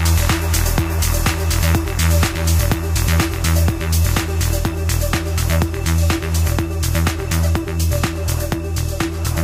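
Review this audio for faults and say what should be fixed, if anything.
Sample clock jitter runs throughout: the converter clock wanders by a few microseconds, so samples land early or late and the error tracks the waveform's slope. It adds hiss and roughness roughly 30 dB below the sound, strongest on loud, bright passages and gone in silences. Prevent it by clocking the converter from a clean, low-jitter reference.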